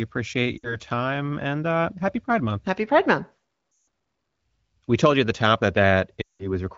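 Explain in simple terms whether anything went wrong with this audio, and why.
Lost AMR speech frames: radio errors corrupted bits of the call, so the phone repeated and quickly faded the last good sound. You hear brief smeared dropouts at 0.58–0.76 s (before "time and uh happy"), 3.71–3.87 s, and 6.21–6.53 s (after "at the top that").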